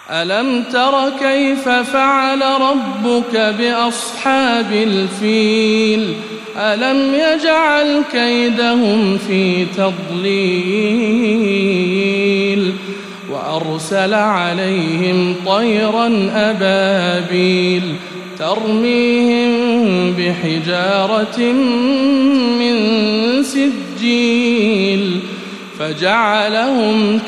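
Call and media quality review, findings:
Timecode bleed, whole clip. Linear timecode at 30 frames per second leaking from an adjacent track or cable into the audio path; probable component: cabling or patch near the timecode source. Symptom: steady chirping warble behind the sound, square-wave code flipping between tones near 1 kHz and 2 kHz, roughly 25 dB below the programme.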